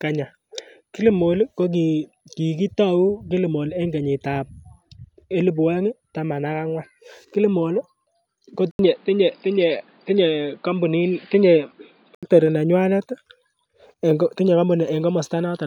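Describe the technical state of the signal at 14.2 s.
At 14.2 s the signal is intact, with no fault audible at that moment.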